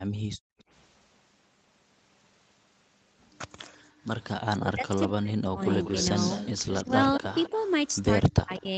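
Background gated by the echo canceller appears in this speech recording from 0.08 to 0.59 s and again from 3.82 to 4.02 s. The room tone falls away by about 36 dB in the first stretch and about 23 dB in the second, then returns. The canceller clamped the microphone hard while its loudspeaker was playing, so the ambience vanished along with the far-end signal instead of only the echo being removed. Echo leak is heard as a delayed copy of the speech trailing it by 194 ms, at 0.59 to 0.64 s, 3.58 to 3.81 s, and 5.7 to 8.61 s. The first two scraps are faint, roughly 30 to 35 dB down. The long final stretch is far more prominent, around 10 dB below the main speech. The likely cause is an echo canceller on a loudspeaker endpoint that failed to fully model the acoustic path, sending residual loudspeaker sound back down the line. Speech suppressed in double talk shows up as the talker's level collapsing in pieces from 4.58 to 5.6 s, by roughly 40 dB over about 0.7 s in total. 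A brief, shallower dip of around 15 dB follows between 6.86 and 7.53 s, and another deep cut of roughly 40 dB comes from 8.32 to 8.67 s. This is likely the canceller confusing simultaneous local speech with echo and attenuating both. The top end stops near 8 kHz, consistent with a wideband call codec path.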